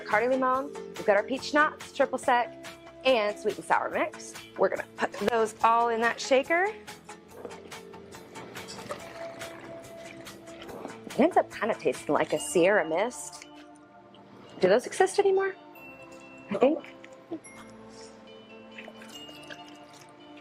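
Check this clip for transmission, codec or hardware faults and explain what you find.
An overlap between stream segments fault occurs three times, at 5.12 s, 11.12 s and 17.11 s. Each one falls where two stream segments meet: their time stamps overlap, so the player trims the shared span even though that sound was never duplicated. Only a few milliseconds disappear each time, and the waveform jumps across the gap. Each is heard as a brief click or tiny skip, repeating every 6.0 s with the segment length.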